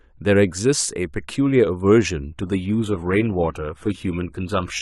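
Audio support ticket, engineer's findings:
Adaptive stream at a lower bitrate, 2.31 s to 4.82 s: codec artefacts in the speech rise abruptly, fitting a drop to a low-rate HE-AAC rendition. No gap, unlike a dropout.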